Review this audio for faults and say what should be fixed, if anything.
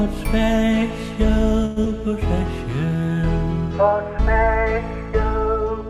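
From 1.65 to 1.78 s there is a call audio freeze: the sound before it is stretched into a fading buzz for about 111 ms, then resumes where it stopped with nothing lost. The likely cause is delayed packets that emptied the jitter buffer. A larger minimum jitter buffer depth would prevent this.

A skip ahead follows at 1.84 to 1.87 s. Playback jumps forward, losing roughly 70 ms of audio with only a brief join, as queued audio is dropped and the delay is cut by about 50 ms. Shedding the backlog gradually through time compression instead of a hard drop would prevent this.

A jitter buffer slow-down runs from 2.86 to 3.15 s. Repeated pitch periods add 67 ms, so the sound plays at about 80% speed with unchanged pitch and drawn-out sustains. Keeping the buffer target more stable would prevent this.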